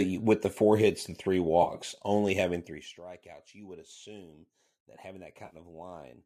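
Speech, with two brief AAC frame losses with concealment: at 1.63–1.74 s, just after "four hits and three", and at 5.46–5.56 s, after "would assume that having". Each replaces about 60 ms of audio, the first split into runs of a few tens of milliseconds. The decoder rebuilds the gaps from the last good spectrum, so they sound smeared and noisy. On a spectrogram the harmonics blur into noisy, stretched bands, and the waveform loses its regular periodic shape. The faint graininess likely comes from low-delay AAC coding.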